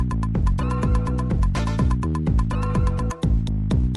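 Nothing technically wrong can be heard in this audio. No fault shows up at any point, so there is nothing to time or trace to a cause.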